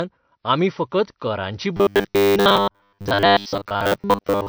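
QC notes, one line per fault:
Throughout: transcoding between lossy codecs. Nothing above the chain's lowest cut-off survives, and the dull top carries two layers of compression smear. That likely comes from a low-rate MP3, around 48 kbit/s, re-encoded to WMA at a higher rate, which keeps the first codec's damage and adds its own.
1.77 to 4.49 s: robotic sound from repeated short buffers, starting right after "आमी फकत करांची". A rigid metallic buzz at 100 Hz sits on the speech to the end. This is likely a 10 ms chunk replayed in place of most of the incoming audio.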